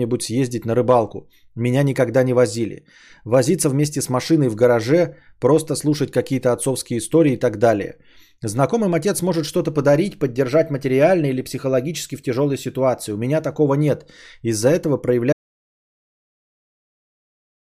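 At 15.33 s the speech is cut off mid-flow by an audio dropout to silence that runs to the very end of the clip, about 2.44 s of nothing. Not even room tone remains, which means the recording kept writing silence after its input vanished, most likely through a disconnected device, a broken link or an accidental mute. On the waveform the trace collapses abruptly to a dead-flat line, and the spectrogram goes completely blank, without even a noise floor.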